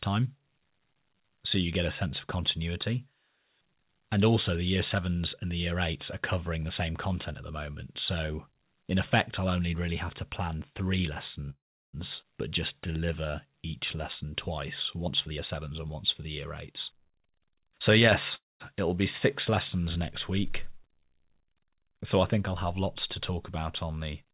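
From 11.5 to 11.95 s there is a call audio freeze: the last speech sound is stretched into a fading buzz, then about 360 ms of silence. The likely cause is delayed packets draining the jitter buffer. Speech resumes where it stopped, with nothing lost.

At 12.21 to 12.25 s a skip ahead follows. Roughly 200 ms of speech is dropped to clear the built-up delay, and the two sides are joined almost directly.

From 12.49 to 14.27 s a jitter buffer slow-down repeats pitch periods, adding 176 ms. Speech runs at 91% speed with unchanged pitch and sounds drawn out.

From 15.06 to 16.25 s a jitter buffer speed-up removes roughly 200 ms in short pitch-period cuts. Speech plays at 117% at the same pitch and sounds hurried. A milder speed-up from 16.72 to 17.72 s runs at 103% and removes about 40 ms.

A second call audio freeze runs from 18.35 to 18.62 s. It gives a brief fading continuation, then about 190 ms of silence, again with nothing missing.

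Throughout, the band stops at 4 kHz, which fits the G.711 A-law codec at 64 kbps.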